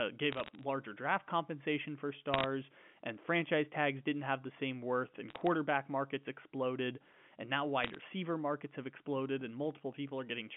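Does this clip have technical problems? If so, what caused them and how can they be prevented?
Yes. Short bursts of sharp ticks and crackle sit on top of the speech at 0.32 to 0.63 s, just before "draft compensation for", at 2.34 to 2.44 s, between "draft compensation for" and "and franchise tags didn't", at 5.30 to 5.47 s, and at 7.84 to 7.98 s, between "markets exploded and now" and "markets have exploded and". These are bit errors on a digital phone line. A fraction of a percent of bits on the G.711 A-law stream were flipped. The sound fits a 64 kbps line band-limited to about 150 Hz to 3.4 kHz. Each flipped bit corrupts a single sample, and hits on high-order bits, or on the sign of a loud sample, throw that sample far off, producing the clicks. Prevention: fix the faulty link or interface causing the errors, or carry the audio over a path with error detection and correction.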